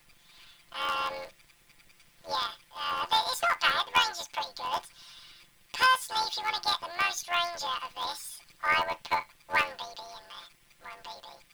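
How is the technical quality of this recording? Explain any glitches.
Not great: planar audio read as interleaved throughout. Each 11.6 ms block, fitting a 512-sample buffer, gets scrambled left-then-right, leaving a robotic buzz at about 86.1 Hz.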